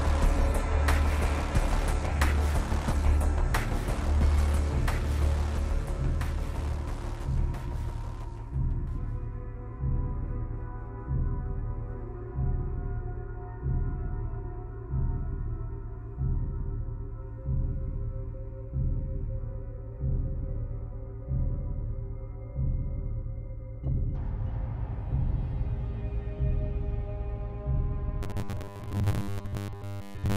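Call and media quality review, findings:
Robotic sound from repeated short buffers, 28.23–30.37 s: rigid 100 Hz buzz. Likely starved playback buffer looping the last 10 ms and skipping most real audio. A fixed pitch distinguishes it from phasey comb filtering.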